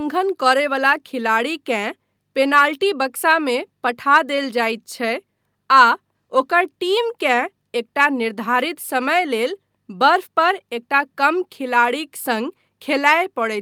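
No faults can be heard anywhere in the recording; the signal path holds steady throughout.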